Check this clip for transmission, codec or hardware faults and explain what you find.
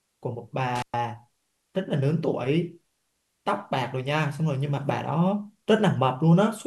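One hardware fault is present in this speech clip. From 0.75 to 0.94 s, an intermittent contact opens the line for about 115 ms: a loose connection breaks, dropping the signal to faint hiss, with crackle at both edges, unlike a clean digital dropout.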